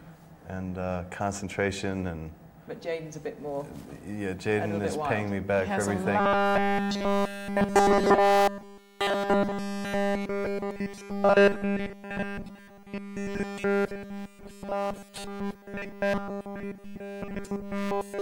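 From about 6.2 s right through to the end, the sound collapses into that rigid, metallic robotic sound from repeated short buffers. There's a fixed buzz at 200 Hz sitting on everything, and it barely lets up at all. The cause is likely starved input: new audio stopped arriving often enough, so the software kept looping a tiny 5 ms slice, skipping the real material and stamping that constant pitch onto what's left.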